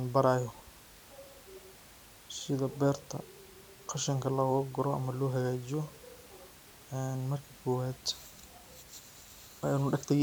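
No technical faults can be heard anywhere here.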